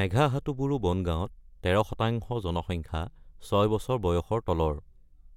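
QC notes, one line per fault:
No technical faults were found in the signal.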